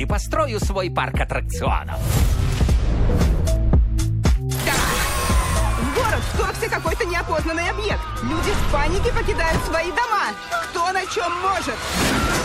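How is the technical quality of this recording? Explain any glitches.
One glitch stands out. At 4.24 s a brief hiss, about 13 dB above the background, smears 11 ms ahead of a sharp attack. This is pre-echo: the codec spread its quantisation noise across a long transform block instead of switching to short blocks.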